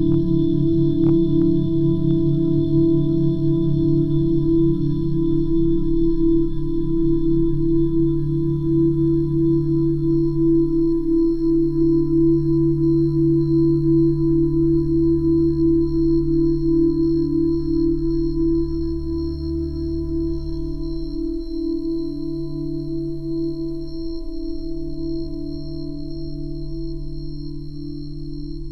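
Hard clipping occurs at 0.06 to 0.14 s, 1.04 to 1.42 s, 2.11 s, 2.78 to 2.84 s, 3.94 s and 12.29 s. At each of these moments the peaks ask for more level than the signal path can carry, so the waveform is sliced flat at its ceiling. The overload is slight, about 2 dB at most. It comes across as brief crackle and a thin edge of high harmonic grit on the loudest moments.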